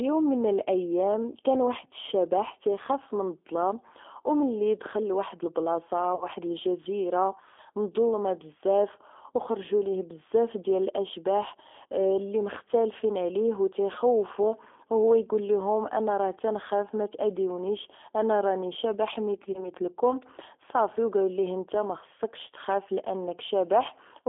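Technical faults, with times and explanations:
Throughout: G.729 codec. The sound is confined to roughly 300 Hz to 3.4 kHz and rebuilt at 8 kbit/s from a vocal tract filter, a pitch predictor and a few pulses per frame, which plainly gives it a rough, slightly synthetic sound.
6.15–6.27 s and 19.52–19.69 s: VoIP packet loss concealed by the speech codec. After "وملي دخل لواحد البلاصة", about 60 ms is missing, which fits three 20 ms packets. After "تاذيني انا راني شبح", about 20 ms is missing. In both gaps the decoder extends its last pitch and filter into a fading buzzy tone or coloured noise. The sound stays weak or distorted for a while after packets return, because each frame builds on the last; the first gap is followed by "الجزيره مظلمة بزاف وخرجو".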